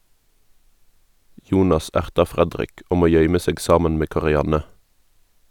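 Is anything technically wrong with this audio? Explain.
No, nothing technically wrong is audible anywhere in this speech recording.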